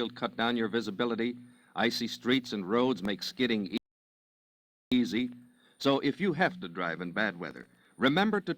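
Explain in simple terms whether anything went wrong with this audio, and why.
A processor overload crackle appears twice, from 3.05 to 3.31 s and from 7.51 to 7.85 s. The computer kept missing its deadlines for tiny chunks of sound, each under a millisecond, and filled the gaps with stale audio. That creates a gritty crackle laid over the sound, worse in the second burst, while the sound keeps moving forward.

A rebuffering stall runs from 3.78 to 4.92 s. The player ran out of downloaded audio and stopped, giving clean silence for about 1.14 s, then picked up exactly where it had left off. Unlike the crackle, this is a clean pause with no grit, and nothing is skipped.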